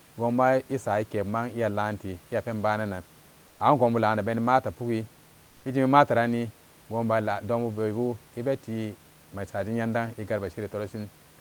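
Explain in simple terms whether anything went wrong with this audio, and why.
From 3.47 to 3.59 s, just before "angonbulana beni mata pugi", the room's natural hiss briefly turns flat, featureless and slightly quieter. This is comfort noise in place of the background, likely because the sender stopped transmitting during the pause and the receiver filled the gap with synthetic noise.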